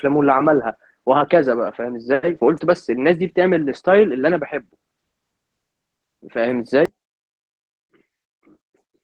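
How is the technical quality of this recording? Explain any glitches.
The recording has two audible faults: codec damage throughout and a sudden collapse in level near the end.

Opus voice compression, whole clip: a low-bitrate Opus encoder, consistent with about 16 kbps in hybrid mode, codes speech with linear prediction under 8 kHz and a coarse transform layer above. Its crude excitation coding leaves the speech plainly hoarse, muffled and slightly robotic.

One channel inverted, 6.85 s to the end: from here the level drops by about 30 dB, leaving only a faint trace of the speech. The likely cause is one stereo channel flipped in polarity, so the shared centre content cancels when the channels are summed to mono.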